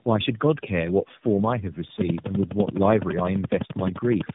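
Speech that has passed through tandem speech coding, re-encoded across roughly three codec hops (the roughness and warble point to AMR-NB and iLBC links joined by G.711), sounds muffled, with a spectrogram showing nothing above 3.7 kHz. From 2.01 to 4.30 s a regular train of clicks ticks about 12 times a second, roughly thirty in all, likely from nearby interference. These appear as evenly spaced vertical lines on the spectrogram and sharp spikes on the waveform, peaking about 15 dB above the speech.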